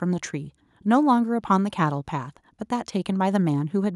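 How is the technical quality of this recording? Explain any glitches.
No glitches or technical faults.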